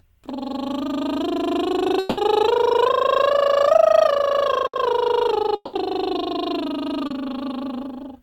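From 1.99 to 2.19 s the music breaks off and the last sound is drawn out as a fading buzz or hiss for about 180 ms. That passage never returns, and playback resumes further on. This is a long network dropout, likely a stall in packet arrival that the receiver papered over by extending what it last had.

At 4.67 to 4.75 s a burst of packet loss removes about 60 ms. The receiver holds the preceding sound and turns it down across the gap, then jumps ahead with that slice missing.

A second long network dropout runs from 5.55 to 5.75 s, again likely from packets failing to arrive. About 180 ms of music is lost. The held, decaying continuation gives way to roughly 30 ms of silence before the audio picks up later in the piece.

Around 7.07 to 7.12 s, short concealed packet loss drops about 20 ms. The receiver synthesises roughly 30 ms from the last sound and blends it back in, which leaves a brief smear in the music.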